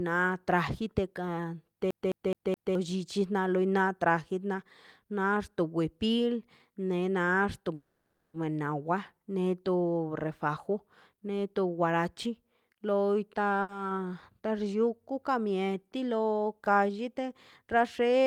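At 1.91 s the speech starts to stutter with a fast, even judder: the same 0.21 s snippet plays four times, with a tiny mute at each jump, until 2.75 s. This is a CD stuck on one turn. A scratch knocks the laser back one track at the same point on every rotation, so the player keeps re-reading one revolution's worth of audio instead of moving on. Right after "na nexto", from 7.74 to 8.36 s, the sound does not break off. The last sound carries on as a fading buzz for about 0.6 s, and then the speech resumes exactly where it stopped, with nothing lost. That is a call audio freeze. Packets were most likely held up in transit, so the jitter buffer ran dry and the receiver kept extending the final sound until the delayed data arrived, leaving the rest of the clip running 0.6 s later. A much smaller version comes at 13.62 to 13.71 s, where one sound is held about 70 ms too long with a faint buzzy dip before the speech continues intact. 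This is a short stall from a late packet: one packet missed its playout time, and the receiver stretched what it already had until the packet turned up. From 16.35 to 16.99 s the speech sounds hurried but keeps its normal pitch, running at about 107 % of its proper speed. This is a jitter buffer speed-up. With a backlog of audio queued, the receiver trimmed many tiny pitch-period slices in quick succession, roughly 50 ms in total, to bring the delay back down.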